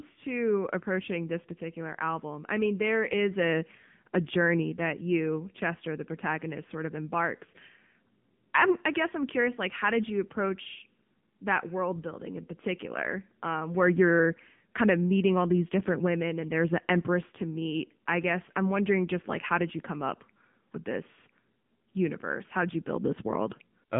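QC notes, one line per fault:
throughout: AMR narrowband mobile codec. Speech sits in a telephone band of 150 Hz to 3.6 kHz with nothing above 3.8 kHz. The plainly audible buzzy, synthetic edge comes from pulse-driven vocal-tract coding, which fits a low bitrate near 8 kbps.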